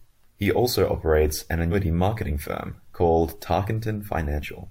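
Compressed frames are skipped at 1.71 to 1.74 s, between "also operates an" and "marketing firm called". About four frames of roughly 43 ms each never reach the decoder's output, so around 150 ms of speech vanishes. The speech jumps ahead at that point.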